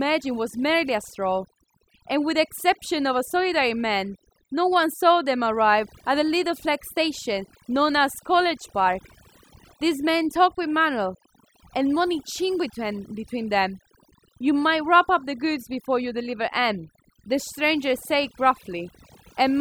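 From the first second to the last, the speech carries overdone noise removal: a noise reducer pushed too hard has switched off individual frequency bands whenever they came close to its noise estimate, taking the quieter parts of the voice with them. The background drops and breaks up into twinkling specks. On a spectrogram the gaps show as scattered isolated dots of energy and ragged, hollowed-out harmonics.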